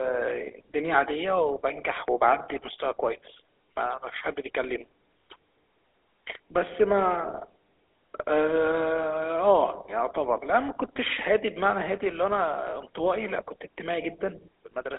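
Speech passed through the GSM full-rate codec for its whole length, with a codec that models the vocal tract and excites it with sparse, regularly spaced pulses, which fits the 13 kbps full-rate scheme. The line band runs from about 300 Hz to 3.6 kHz and nothing survives above 3.8 kHz, so the sound is thin and muffled, and the pulse excitation leaves a plainly audible buzzy, gravelly roughness on the speech.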